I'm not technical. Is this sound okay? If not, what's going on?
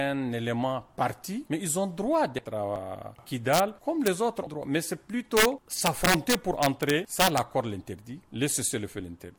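No. The sound has two problems.

First, compressed frames skipped. At 2.38 s and 4.46 s, small chunks of the audio are missing. About 70 ms is lost the first time and about 200 ms the second. You hear the sound jump ahead.

Second, integer overflow. Loud parts went past the digital limit and wrapped around. They produce harsh cracks, much sharper than ordinary distortion. These happen at 3.53–3.60 s, at 4.07 s, at 5.37–5.45 s, and through a long stretch from 5.86 to 7.38 s.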